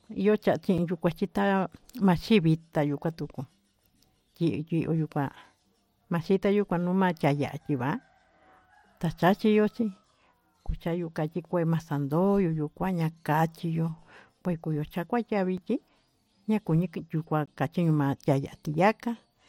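It's a speech clip with three short blocks of digital silence, at 0.78 s, 15.58 s and 17.46 s. The first two last about 6.8 ms and 5.0 ms and come across as sharp ticks. The one at 17.46 runs about 18.6 ms, so it's more of a tiny hole. The audio drops straight out and back with no fade, which points to the output buffer not getting filled in time.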